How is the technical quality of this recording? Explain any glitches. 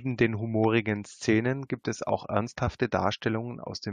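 The recording has one glitch: a sharp snap at 0.64 s, lasting only a couple of milliseconds and sitting on top of the speech. It sounds like an electrical switching spike, likely a nearby switch, motor or static discharge arcing briefly and coupling into the audio line.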